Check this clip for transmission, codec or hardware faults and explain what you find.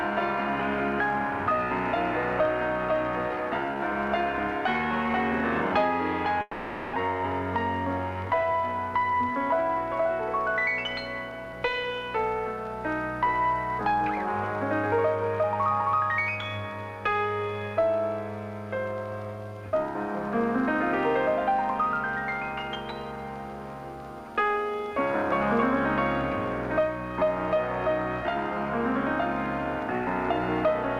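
Two transmission faults are present, both on the network side.

From 6.41 to 6.97 s there is a long network dropout, likely from lost packets. The receiver fills about 540 ms with a fading continuation of the last sound, with no silence, and about 400 ms of audio never returns. Playback resumes roughly 100 ms later than before.

From 8.34 to 10.01 s a jitter buffer speed-up follows, as the receiver drains that added delay. It trims short pitch-period segments repeatedly, running the audio about 3% fast at unchanged pitch and removing roughly 70 ms.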